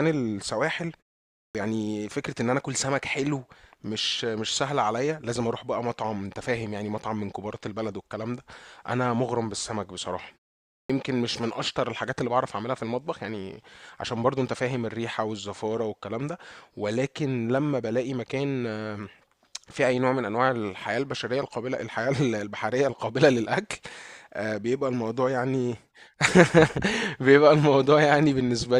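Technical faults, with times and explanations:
1.31–1.55 s and 10.64–10.90 s, clipped start after a pause: after silences of 0.37 s and 0.34 s the output device had dropped into an idle state and was slow to wake, so about 240 ms and 255 ms of speech are lost, and speech bursts in abruptly without its opening sounds.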